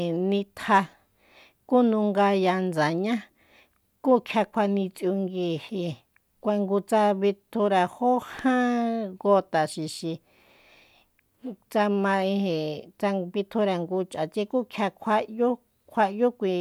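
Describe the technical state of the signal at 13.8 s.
At 13.8 s the speech signal is intact, with no audible technical fault at that moment.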